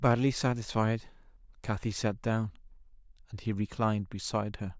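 No technical faults can be heard in this speech recording. Nothing in the signal path calls for comment at any point.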